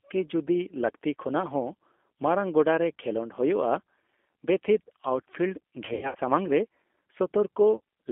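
Throughout, the speech sounds thin, slightly rough and synthetic, confined to a narrow band of about 250 Hz to 3.5 kHz. This is the G.729 codec at 8 kbit/s, rebuilding the voice from a vocal tract filter, a pitch predictor and sparse pulses, which leaves plainly audible coding damage.

From 5.85 to 6.18 s the sound turns buzzy and smeared, then fades and recovers unevenly. About 180 ms of audio went missing in scattered gaps over roughly 300 ms, the longest run 90 ms. This is VoIP packet loss concealed by the speech codec, which stretched its last pitch and filter at falling gain. A shorter dropout at 7.77 to 7.80 s gives a brief blurred stretch from the same concealment covering about 30 ms, which fits a single lost packet.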